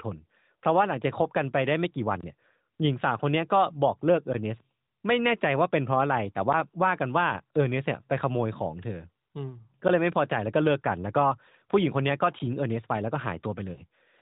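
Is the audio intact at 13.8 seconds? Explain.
No. Around 13.74 to 13.81 s there are lost AMR speech frames: one 20 ms frame failed its checksum, and the decoder filled it by repeating the previous pitch and vocal tract settings at falling gain. It sounds like a brief warble or dip. On a waveform, the envelope sags briefly. On a spectrogram, the harmonics smear flat and fade slightly before normal detail returns.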